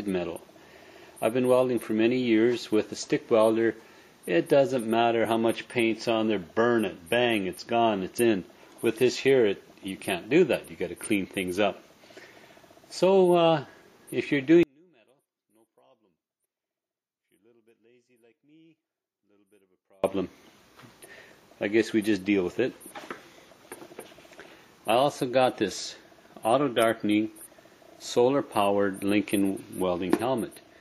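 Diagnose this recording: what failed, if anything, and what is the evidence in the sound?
From 14.63 to 20.04 s the sound drops by about 38 dB, background included, leaving only a small residue. The likely cause is one channel inverted, in the wiring or stereo-to-mono stage. Summing reversed polarity cancels the shared content.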